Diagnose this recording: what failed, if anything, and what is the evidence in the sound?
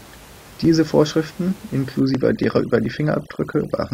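Call processing failed: overdone noise removal from 2.0 s to the end. Room noise sits about 23 dB below speech, yet bands near it get gated, leaving twinkling specks in the background.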